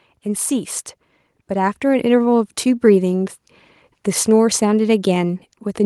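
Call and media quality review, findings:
Automatic gain rising, 1.48–2.39 s: speech and background noise floor swell together by about 4 dB over roughly 0.9 s. Probable component: capture-side AGC lifting gain after judging input too quiet. The gradual, joint ramp rules out a sudden level step or talker moving closer.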